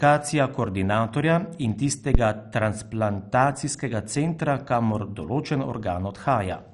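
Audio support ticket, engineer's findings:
Dull, gurgling, granular speech throughout. Nothing above 11.3 kHz. Likely MP2 compression, sub-bands starved of bits, which fits a low rate around 48 kbps.

Phantom power thump, 2.15–2.21 s, after "koordinatorja in", before "transplantacijskega centra kamor določen". Supply step through coupling capacitors. Deep thump, decays in about 14 ms.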